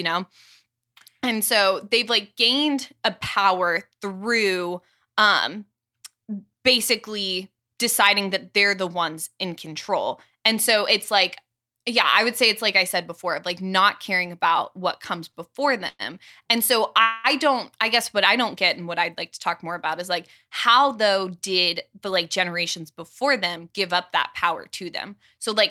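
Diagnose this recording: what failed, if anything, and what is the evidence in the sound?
The network stage failed, with the receiver's jitter buffer running dry. Just after "caring about what comes", at 15.31 to 15.37 s, one sound is held about 26 ms too long with a faint buzzy smear, and then the speech resumes from exactly where it paused. This is a short stall from a late packet. Nothing is lost, and unlike a freeze the hold is too brief to decay into a fading buzz or silence.

Two call audio freezes follow, at 15.88 to 16.13 s and at 17.02 to 17.27 s, the second ending just before "don't I". In each, the last sound is extended as a buzzy tail that fades. The first fills about 112 ms, including roughly 30 ms of near silence. The second fills about 222 ms without going silent. Packets were likely held up in transit. The speech then continues unbroken, so time is inserted rather than content dropped. 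That distinguishes these from packet loss, which would skip material.

After the delayed packets arrive in a burst, the buffer sheds the excess through a jitter buffer speed-up. From 19.72 to 20.96 s, right after "I'd like to talk", and again from 21.58 to 23.94 s, the speech runs about 5% fast at unchanged pitch and sounds slightly hurried. Roughly 70 ms and then about 150 ms are trimmed as tiny pitch-period cuts. The unchanged pitch rules out a sample-rate mismatch, and there are no audible jumps as there would be with dropped frames.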